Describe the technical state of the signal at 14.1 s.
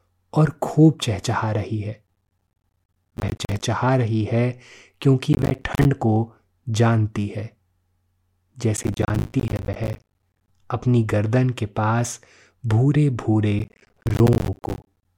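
At 14.1 s the speech is in the middle of a burst of processor overload crackle running from 13.59 to 15.05 s. The processor keeps missing its deadlines for buffers of around 10 ms, about 70 of them over the stretch, and each miss drops to silence with hard edges, giving a gritty, tearing crackle over the speech. The waveform shows repeated flat silent gaps with abrupt cliffs. On a spectrogram, thin broadband vertical stripes mark each edge.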